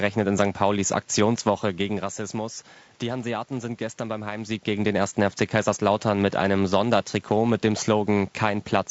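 Throughout the speech, the voice sounds rough and grainy, with hiss filling the gaps between harmonics and a dulled top band. This is likely low-delay AAC compression (AAC-ELD), which fits about 32 kbps.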